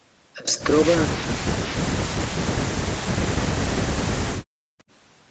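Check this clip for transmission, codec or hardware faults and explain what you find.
One transmission fault stands out, near the end of the clip.

Background gated by the echo canceller, from 4.44 to 4.78 s. While far-end audio was coming out of the loudspeaker, the echo canceller decided the microphone was mostly picking up that playback and pulled its gain down sharply. The room sound behind the speech falls away by as much as about 40 dB for roughly a third of a second, leaving a near-silent hole, then comes back once the canceller releases its grip.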